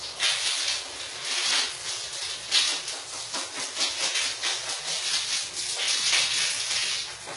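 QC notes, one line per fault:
Throughout, HE-AAC compression: the treble stops dead near 11.1 kHz and what sits below it sounds gritty and metallic, with bright detail that doesn't match the body of the sound. This is likely spectral band replication, with upper bands copied from lower ones, at heavy damage fitting roughly 12 kbps.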